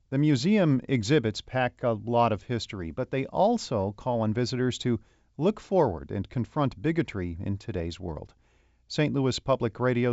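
Nothing in this speech clip needs fixing: it's carried over G.722 wideband telephone coding at 64 kbit/s, which shows up as a faint trace of that coding and a top end that stops at about 7.7 kHz, just as a wideband call should.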